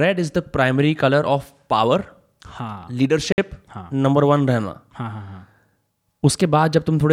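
At 3.32 s the wireless link likely hit a Bluetooth stall: interference held back packets, the headphones' buffer ran empty, and playback halted until resent packets arrived. The speech cuts to silence for 56 ms, through 3.38 s, before sound returns.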